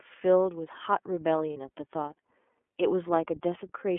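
Throughout, the iLBC codec confines the speech to a telephone band of roughly 250 Hz to 3.4 kHz, with plainly audible damage: a rough, slightly synthetic texture that fits its 13.33 kbps mode with 30 ms frames. A spectrogram shows a hard ceiling near 3.4 kHz.

At 1.53 to 1.56 s, lost iLBC frames leave a 30 ms gap that the decoder fills by repeating the last pitch cycle mixed with noise. It sounds like a brief buzzy, held vowel, and the waveform shows repeated, noise-mixed cycles before normal speech returns.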